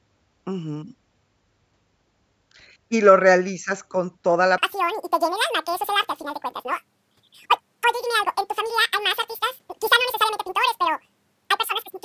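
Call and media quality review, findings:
Wrong sample rate, 4.58 s to end of clip, right after "lo realizas con toda". Speech suddenly twice as fast and a full octave (12 semitones) higher, voice chipmunk-like and hurried. Probable component: playback or resampling stage. Samples clocked out at double the recorded rate with no conversion, consistent with 16 kHz audio played as 32 kHz.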